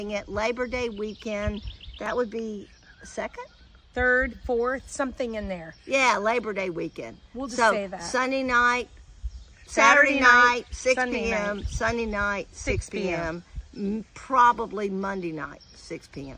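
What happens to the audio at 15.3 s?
Nothing goes wrong at 15.3 s; the audio there plays through intact, with no dropout, click or other fault.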